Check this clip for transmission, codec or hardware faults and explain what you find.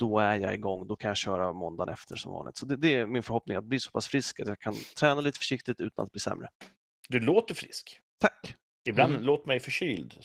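One codec fault runs through the whole speech clip. Opus voice compression is plainly audible from start to finish. A linear-prediction core codes the lower band and a coarser layer the top at a rate consistent with about 16 kbps, leaving speech hoarse and slightly robotic. A spectrogram shows smeared, blotchy upper harmonics changing in 20 ms steps.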